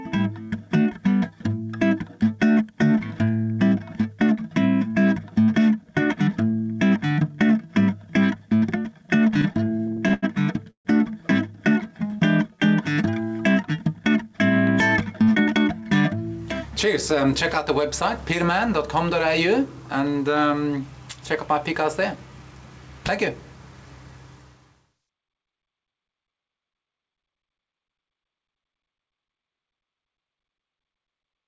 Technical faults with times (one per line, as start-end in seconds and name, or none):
9.30-10.24 repeated stalls (stutter)
10.70-10.87 call audio freeze
15.21-15.69 jitter buffer speed-up
27.07-27.75 jitter buffer speed-up